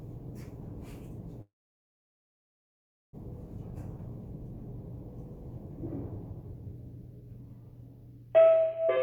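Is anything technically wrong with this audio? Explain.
Yes, there are two faults.

From 1.41 to 3.15 s there is a call audio freeze. The sound briefly carries on as a fading continuation of its last moment, then drops to silence for about 1.6 s, and resumes exactly where it left off. The likely cause is packets held up in transit, so the jitter buffer ran dry and the receiver filled about 1.7 s with concealment. Nothing is lost, but everything afterwards is delayed by that same 1.7 s.

From 8.87 to 9.01 s there is a jitter buffer speed-up. The buffer holds more audio than its target, so the receiver trims the excess by cutting out short pitch-period-length pieces in quick succession, about a tenth of a second in total. Over this stretch the audio plays at roughly 170% speed with its pitch unchanged, so it sounds abruptly rushed and compressed in time right at the end.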